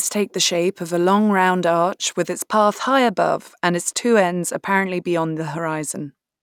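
Channel delay (comb filtering) affects this speech clip from 2.35 s, just after "long round arch with", through to the end. One channel runs late by roughly a single sample, only a few hundredths of a millisecond, and the two are then summed to mono. With so tiny an offset, the first cancellation notch falls up near 20 kHz. The top of the spectrum is pulled down rather than carved into many notches, so the sound turns duller from that point on.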